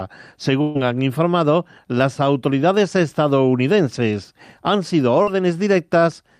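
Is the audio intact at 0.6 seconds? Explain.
No. A burst of packet loss at 0.61–0.77 s drops about 140 ms; concealment stretches and fades the last sound, then the audio resumes at "han informado las autoridades".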